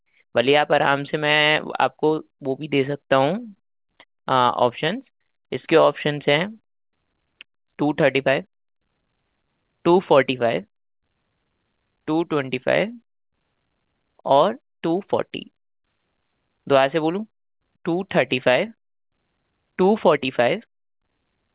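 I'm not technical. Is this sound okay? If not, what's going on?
Yes, it's fine: the speech came through an ordinary phone-style call connection, which leaves out everything above about 4 kHz, and nothing has gone wrong anywhere along the way.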